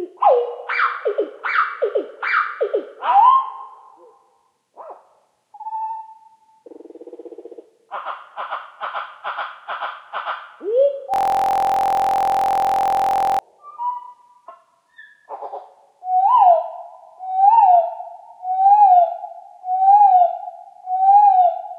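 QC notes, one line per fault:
11.14–13.39 s, system hang loop: The system froze while the hardware kept replaying its ring buffer. One 23.2 ms slice repeats nearly a hundred times. The short loop gives a steady buzz at 43.1 Hz. That fits a 1024-sample buffer.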